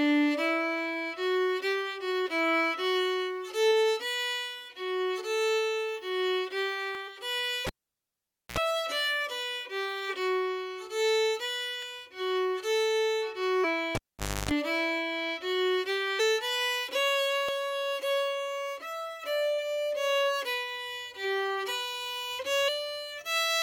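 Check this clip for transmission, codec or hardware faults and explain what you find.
Three kinds of fault are present. There are short skips, compressed-stream glitches and two cable disconnections.

The first is a dropped buffer (overrun). It is heard at 6.95, 11.83 and 17.49 s. Each is a small jump forward in the sound. There is no gap of silence. The cause is likely a buffer overrun. The program did not read its samples in time, and the hardware overwrote them. The lost piece is about 15 ms at 6.95 and 17.49 s and about 10 ms at 11.83 s. The edges on either side are joined directly.

The second is damaged data in a compressed stream. It occurs at 7.07 s, from 13.63 to 13.65 s, at 16.19 s, and from 22.67 to 22.69 s. Each is a brief chirp or blip. Some bytes in the stream were wrong there. The decoder misread those frames and lost its place. It then searched for the next valid frame header. 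Each glitch ends once sync is regained.

The third is a cable pulled and plugged in, which happens twice. From 7.67 to 8.58 s there is a pop and then near silence for about 0.87 s. A burst of 60 Hz mains buzz lasting about 63 ms follows as the plug tip makes contact. A second pop marks the return of the sound. From 13.95 to 14.51 s the same pattern repeats. The dropout lasts about 0.51 s, and the buzz runs at 50 Hz for about 0.29 s.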